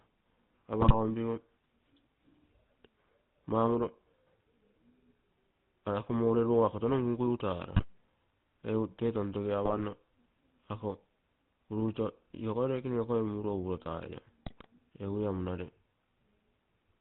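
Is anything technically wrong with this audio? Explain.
Yes. Throughout, the speech has a buzzy, gravelly roughness and nothing above 4 kHz, the GSM full-rate codec at plainly audible strength, consistent with a 13 kbps stream. It models the vocal tract and drives it with sparse, regularly spaced pulses, which leaves that coarse texture.

Four short bursts break into squawks, pops and gargling: 0.81 to 0.94 s, 7.76 to 7.85 s, 9.64 to 9.87 s and 14.46 to 14.67 s. These are GSM bit errors. Corrupted filter, pitch or gain values distort the spectrum and level of each damaged frame.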